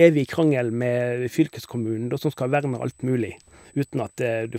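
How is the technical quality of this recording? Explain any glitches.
A steady high whine runs under the speech for the whole clip, and it's classic USB whine. It sits at a fixed 8 kHz, roughly 35 dB below the speech, so it's faint. The bus pulls current in 125 microsecond microframes, and that ripple gets into the audio through the power or ground line, landing as a thin, fixed-pitch tone at exactly 8 kHz.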